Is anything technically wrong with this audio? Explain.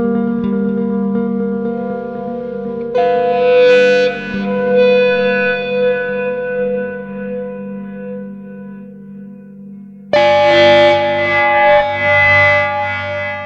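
No, the signal holds steady throughout, with no audible technical faults at any point.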